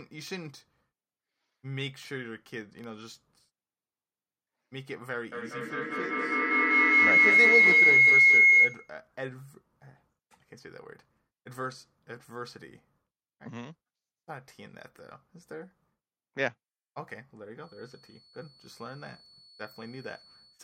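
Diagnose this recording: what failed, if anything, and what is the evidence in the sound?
The stage is the call's acoustic path, a loudspeaker-to-microphone loop. A feedback howl starts at 5.32 s and runs to 9.01 s, centred around 2 kHz and peaking about 16 dB above the speech. It repeats roughly every 200 ms, the loop's round-trip delay, and grows on each pass because the loop gain exceeds unity. That rising build separates it from a steady tone or an echo that fades.

From 17.54 s to the end, a thin, steady 4.4 kHz feedback whistle sits roughly 20 dB below the speech and swells and fades slowly in level. It neither climbs nor pulses, which sets it apart from the earlier howl. The likely cause is a loudspeaker-to-microphone path held just at the edge of feedback, with loop gain near unity, so one frequency rings on without running away.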